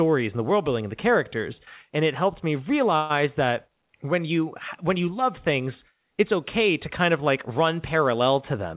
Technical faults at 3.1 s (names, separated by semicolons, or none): call audio freeze